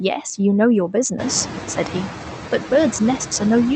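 Noise suppressor artifacts run through the whole clip. The suppressor judges, frame by frame, which frequency bands hold steady noise and pulls them down by about 5 dB. That cut is shallow, so the background never fully clears. It dips in the gaps between phrases and swells back under the speech.

Noise suppressor catching up occurs from 1.18 to 1.35 s. Around the one-second mark the room noise jumps by about 15 dB, settling only about 10 dB below the speech. The suppressor's noise estimate still reflects the quieter room, so for roughly 170 ms the louder noise comes through with less reduction. It then sinks by about 5 dB as the estimate adapts. The audio is band-limited to 8 kHz, which fits an Opus call path.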